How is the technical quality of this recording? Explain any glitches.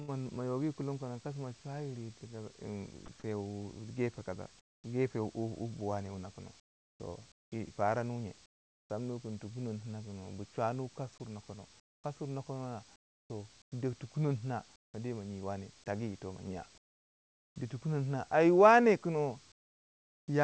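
The recording has two kinds of glitch from the call's transmission; the wideband call audio stops at 8 kHz, which points to a wideband call codec such as G.722, and the room noise sits about 41 dB below the speech.

Sound dropped by the voice detector, 3.06 to 3.08 s: the sender's voice detector likely judged a brief stretch of speech to be background and stopped sending, so about 10 ms of real sound gives way to a 20 ms patch of flat synthetic noise.

Comfort noise in place of the background at 4.60 to 4.84 s, 6.60 to 8.90 s, 11.80 to 14.94 s, 16.78 to 17.56 s and 19.52 to 20.28 s: during pauses the sender likely stopped transmitting and the receiver filled the gaps with generated noise. The real room background turns into a steady, featureless hiss, dropping by about 22 to 26 dB in the pauses at 4.60, 16.78 and 19.52 s.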